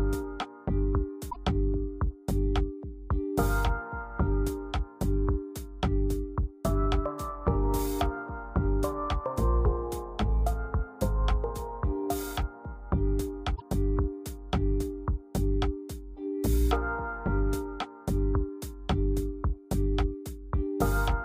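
A broken MP3 bit reservoir is the likely cause of two short disturbances, at 1.29 to 1.36 s and again at 13.55 to 13.62 s. After a cut in the stream, the decoder reaches back for bits stored in earlier frames and reads bytes from the wrong frame instead. Each disturbance lasts about 70 ms, which fits two to three 26.1 ms frames decoded from that mismatched data. The sound also skips forward abruptly at both points.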